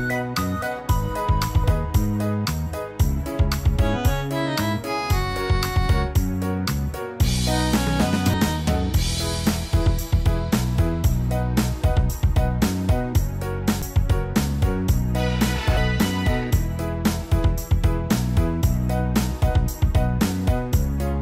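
At 8.34 s, 13.82 s and 15.77 s the audio breaks into a short blip or squawk caused by damaged data in the compressed stream. At each point a stretch of the encoded bytes is corrupt, so the decoder misreads or discards those frames, loses its place in the stream and scans ahead for the next valid frame header before normal decoding resumes. Each disruption is momentary.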